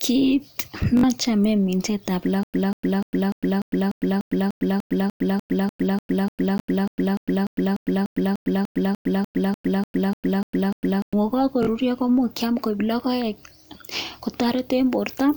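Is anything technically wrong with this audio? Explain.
Yes. Bluetooth stutter at 0.97–1.03 s, 6.6 s and 11.63–11.67 s: late or lost packets make the receiver replay its last slice, giving a brief buzzy repeat, with gaps of 61, 20 and 41 ms.

Stutter with silent gaps from 2.43 to 11.13 s: a 192 ms fragment of the speech returns every 296 ms with 105 ms of digital silence between, likely a stalled stream retrying and running empty each time.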